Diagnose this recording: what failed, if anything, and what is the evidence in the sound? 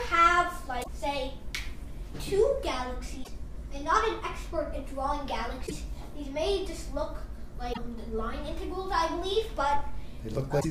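The failure is in the codec stage: damaged data in a compressed stream. Five short bursts of garbled sound, each lasting about 80 ms, break in at 0.80–0.88 s, 3.20–3.28 s, 5.63–5.72 s, 7.69–7.78 s and 10.57–10.65 s, heard as blips or squawks. At each point some of the encoded bytes are corrupt, so the decoder misreads those frames, loses frame sync and produces garbage until it locks onto the next valid header.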